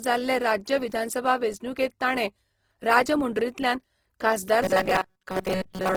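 Throughout, the speech carries the artefacts of a low-bitrate encoding inside a high-bitrate MP3, likely low-bitrate audio saved at a high bitrate; nothing sits above 20.2 kHz.

From 4.64 s to the end, just after "ताणें राजमुंड्रींतल्यान खासदार", robotic sound from repeated short buffers imposes a rigid metallic 188 Hz buzz, likely from a roughly 5.3 ms buffer repeated most of the time.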